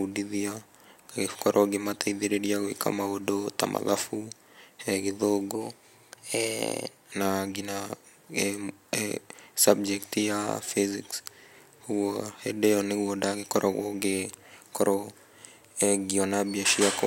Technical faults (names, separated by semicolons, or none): wrong sample rate